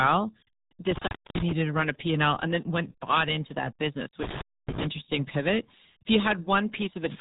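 From start to finish the speech passes through the RealAudio 14.4 codec, heavily. Nothing survives above 3.8 kHz, so a spectrogram shows a flat ceiling there. The low-rate coding leaves a muffled, gargling quality that fits an 8 kbit/s dial-up speech codec.

At 0.90 to 1.52 s, just before "to run a", an intermittent contact breaks the line. A loose connection opens for about 0.28 s. The sound drops to faint hiss with crackle at each edge. The waveform shows a near-flat gap bracketed by sharp spikes.

The same intermittent contact fault returns at 4.23 to 4.87 s, right after "bought into that business". The line again opens for about 0.28 s. The spectrogram shows a dark column with broadband vertical streaks where the crackle marks the break and the reconnection.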